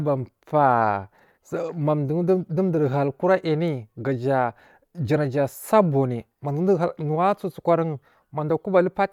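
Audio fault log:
No technical faults can be heard in the speech; the signal stays continuous and stable throughout.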